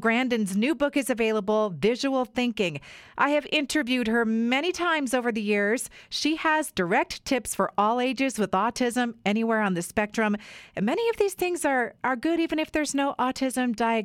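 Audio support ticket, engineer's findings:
Listened through the speech clip and nothing stood out.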